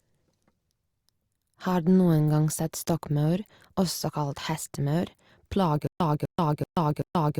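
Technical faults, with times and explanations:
5.87 s to end: stutter with silent gaps, a 250 ms speech burst repeating with 132 ms dead silences, likely from a stalled stream replaying its last fragment.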